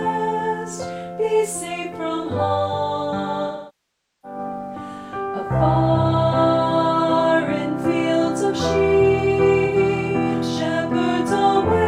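AAC frame loss with concealment occurs twice in this audio. From 3.47 to 4.39 s, roughly 0.77 s of coded data goes missing, which fits a run of about 18 frames. The decoder rebuilds the gap from the last good spectrum, so the sound smears, then decays into silence and fades back in. A second, brief dropout at 9.65 to 9.76 s, about 85 ms and consistent with two lost frames, leaves only a short noisy, phasey patch.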